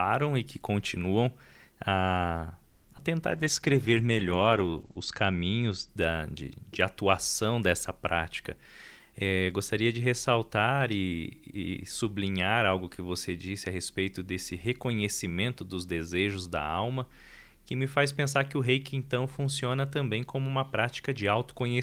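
Right after "e que continuam a", from 2.69 to 2.86 s, the sound stalls into a fading buzz for about 150 ms, then resumes exactly where it stopped. This call audio freeze was likely caused by delayed packets draining the jitter buffer. Unlike packet loss, nothing is skipped; the audio simply arrives 150 ms later.

Just after it come two short concealed packet losses, at 2.92–2.95 s and 2.97–3.00 s. In each, about 20 ms never reached the decoder, and roughly 10 ms was synthesised from the preceding sound. The result is a quick smear or wobble, and real content is lost rather than delayed.

From 3.31 to 5.95 s, leading into "da de de atuação", a call bitrate drop takes the encoder from 32 to 12 kbps for 1.64 s at its lowest. Bandwidth narrows from 20 kHz to 8 kHz, so the sound turns muffled and watery. This is a sustained tonal change, not a brief gap.

From 8.57 to 10.58 s, a jitter buffer speed-up plays the audio at 108% while pitch stays the same. 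Short pitch-period slices totalling around 150 ms are cut to shrink the backlog. It sounds hurried, with no dropouts or dulling, which separates it from loss and bitrate faults.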